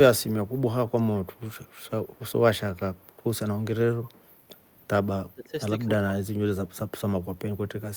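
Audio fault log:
0.87–0.91 s, 1.25–1.41 s and 4.08–4.21 s, echo leak: the far end's echo canceller likely failed to remove all of its loudspeaker pickup, so the speech returns 206 ms late as brief scraps, roughly 30 to 40 dB below the direct speech.
5.22–5.54 s and 5.85–6.08 s, speech suppressed in double talk: with both sides talking at once, the echo canceller likely could not separate the talker from loudspeaker echo and turned both down, so the speech sinks by around 15 dB.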